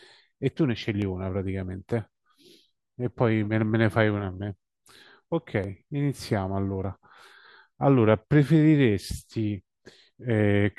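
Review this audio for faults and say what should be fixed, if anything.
Dropped buffer (overrun) at 1.02, 5.64 and 6.84 s: each jumps the speech forward about 20 ms with no gap, likely from samples overwritten before being read. Enlarge the capture buffer or raise the recording thread's priority so every block is collected in time.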